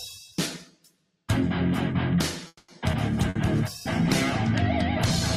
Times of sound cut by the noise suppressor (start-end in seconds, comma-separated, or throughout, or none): 0.59-1.29